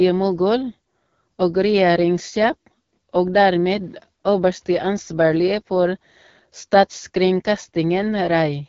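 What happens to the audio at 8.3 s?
At 8.3 s the speech is still passing through the AMR wideband (HD Voice) codec, as it does for the whole clip, at a low rate, which fits about 8.85 kbit/s. Its pulse-driven model turns the speech plainly rough and raspy, with nothing above 7.5 kHz.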